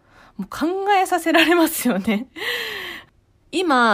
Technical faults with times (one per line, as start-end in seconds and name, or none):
none